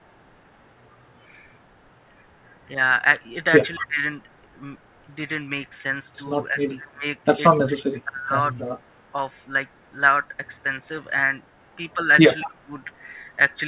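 At 3.76–4.01 s the speech dips sharply, by about 20 dB, and it dips again at 6.41–6.59 s (about 10 dB), 6.79–7.06 s (about 25 dB), 7.63–8.32 s, 8.66–8.71 s and 12.42–12.74 s. This is speech suppressed in double talk, likely an echo canceller ducking the talker while the far side was also speaking. It differs from packet loss because the level sinks and recovers rather than dropping to silence or leaving a glitch.

At 7.51–7.59 s and 12.46–12.51 s a faint copy of the voice trails it by 226 ms, at about 30 dB and then about 15 dB below the speech. This is echo leak, likely from a far-end canceller letting loudspeaker pickup back through. The fixed delay marks it as echo rather than room reverb. All of the audio stops at 4 kHz, which fits a G.711 narrowband call path.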